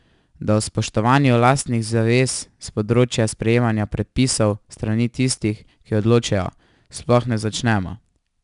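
The speech has been through 4-bit ADPCM compression for its whole length. Each sample is coded as a coarse 4-bit step from a predicted value, with the step size adapting as it goes. The resulting error rides on the signal as a gritty hiss that swells with every loud syllable, and the step can't grow fast enough on sharp onsets, so they distort. Nothing is present above 10.6 kHz, which dulls the top end and fits a sample rate near 22 kHz and a data rate around 89 kbps.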